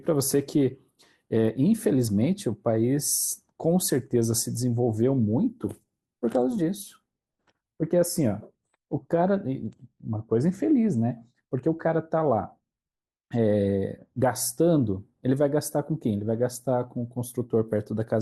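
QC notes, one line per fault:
No faults found on the speech track.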